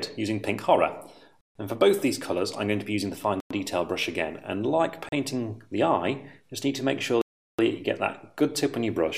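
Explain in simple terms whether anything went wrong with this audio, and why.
The sound cuts to silence four times: 1.41 to 1.55 s, 3.40 to 3.51 s, 5.09 to 5.12 s, and 7.22 to 7.59 s. This is a Bluetooth stall. Radio interference likely delayed the audio, so the headphones briefly ran out.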